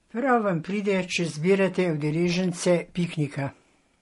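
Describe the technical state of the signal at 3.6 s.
At 3.6 s the speech sits inside a fault that runs through the whole clip: it has likely passed through transcoding between lossy codecs, which fits an HE-AAC encode at around 48 kbit/s followed by an MP3 encode at a similar rate. The MP3 stage spends its limited bits re-coding the earlier encoder's artefacts while adding its own. Both sets of smearing and swirl are heard together, and nothing survives above 11.1 kHz, so the top end sounds dull.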